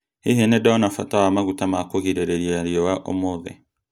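No technical faults can be heard anywhere in the speech.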